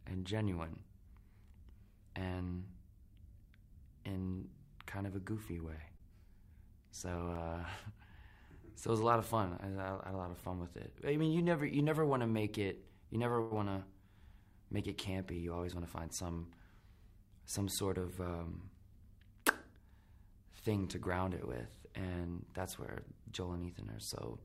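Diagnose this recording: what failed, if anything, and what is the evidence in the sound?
Regular clicks recur every 1.52 s from 1.22 s to 24.1 s, about fifteen in all. On the waveform each is a tiny step discontinuity, and on the spectrogram a thin vertical broadband line. This is likely clock drift buffer slips at the driver or buffer stage: two clocks mismatched by around 100 ppm, so a handful of samples are dropped or repeated at each slip.

Two short stalls from a late packet occur at the network stage, at 5.97 s (22 ms) and 13.41 to 13.53 s (97 ms). The jitter buffer ran dry, so the receiver held the last sound until the packet arrived, with nothing lost. The spectrogram shows frozen, smeared horizontal bands, and the waveform shows a repeated, slightly buzzy cycle.

A jitter buffer speed-up runs from 15.46 to 15.90 s. After excess audio built up in the buffer, the receiver cut short pitch-period pieces, about 70 ms in total, playing at 116% speed with unchanged pitch. 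The spectrogram shows compressed timing with the harmonic spacing intact, and the waveform shows periods spliced together.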